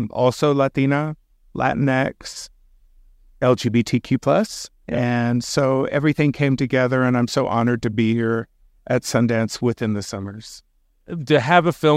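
No technical faults are audible anywhere in the speech.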